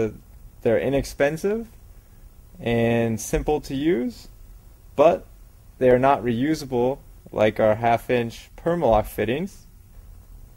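Nothing in the audio trips any alarm: no moment stands out as broken, glitched or dropped at any point along the way.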